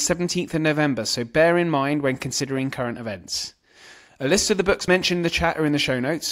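At 4.88 s the speech skips forward: a sliver of roughly 20 ms is missing and the two sides butt together with no silence, unlike a dropout gap. This is audio missing between chunks, likely from a 2.5 s chunk boundary.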